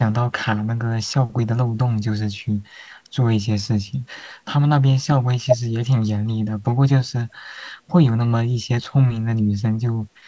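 The speech carries only the ordinary marks of a call and no faults: the microphone processing trims the lowest bass as intended, and nothing reaches above 8 kHz, which fits a wideband codec such as G.722 on a WebRTC call path working as it should.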